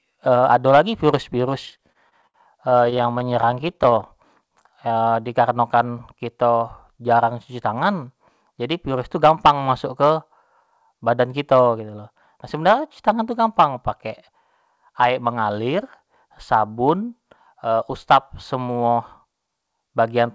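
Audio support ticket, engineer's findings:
Repeated stalls (stutter), 1.66–4.08 s: dozens of brief holds, about 0.44 s filled in total, none longer than 71 ms, nearly a fifth of that stretch. Jitter buffer running dry; receiver extends the last sound. Spectrogram: smeared, flat-lined harmonic segments. Waveform: repeated cycles, faded tails.

Jitter buffer slow-down, 4.43–5.54 s: speech drawn out at 90% speed, pitch unchanged, about 114 ms added. Buffer rebuilding its reserve by repeating single pitch periods. Waveform shows near-identical repeated cycles. Spectrogram shows stretched formants and elongated voiced sounds.

Jitter buffer speed-up, 7.51–9.70 s at 107% speed (roughly 0.15 s dropped) and 18.54–19.48 s at 110% (about a tenth of a second dropped): hurried delivery, pitch constant. Buffer trimming excess delay by cutting pitch periods. Spectrogram: compressed syllables, tighter spacing. 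Waveform: abrupt cycle splices. G.722 call path at 64 kbps, nothing above 8 kHz.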